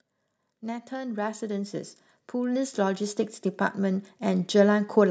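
A speech recording in which the automatic gain control decides the input is too quiet and steadily turns itself up, an automatic gain rising fault running from 0.6 s to 3.11 s. Over those two and a half seconds the gain climbs by about 9 dB, so the voice and the room noise beneath it swell together in one slow ramp, with the background rising just as much as the speaker.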